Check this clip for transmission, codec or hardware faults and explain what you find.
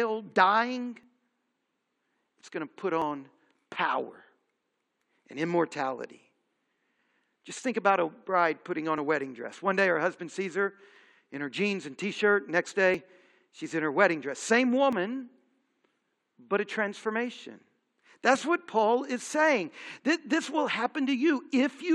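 There's one problem here: overlap between stream segments, producing tiny skips at 1.03, 3.02, 6.99, 8.98 (between "a bride putting on" and "a wedding dress"), 10.96 (after "her husband sees her", before "in her jeans and"), 12.94 (just before "she's in her wedding") and 14.93 to 14.95 s. The joins between 2.0 s segments overlap, so the player trims 8 to 20 ms of real speech each time. The waveform jumps, giving a tick or tiny skip about every two seconds.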